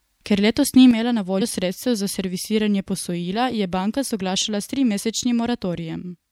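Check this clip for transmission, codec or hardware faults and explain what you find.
Two faults are audible: a stereo channel drop and a short skip from missing compressed frames.

From 0.91 s to the end of the clip, one channel drops out, most likely from a lost stereo channel somewhere in the chain. Once the two channels are folded to mono, only half of the shared signal remains, so the speech abruptly falls by about 6 dB and stays quieter for the rest of the clip. Anything that was carried only in the lost channel vanishes.

At 1.40 s, compressed frames are skipped. The decoder never played a short run of frames, either because they were missing from the stream or because they were rejected as damaged. The frame spacing points to frames of about 26.1 ms, and the gap fits roughly three of them, around 70 ms of speech. The speech jumps ahead at that point.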